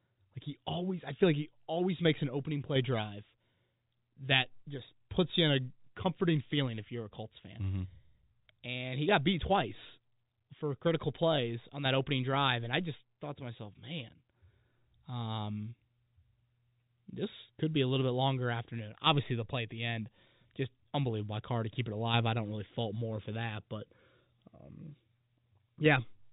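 No technical faults occur in this speech recording.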